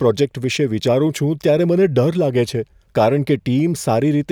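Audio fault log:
No audible faults in the speech at any point.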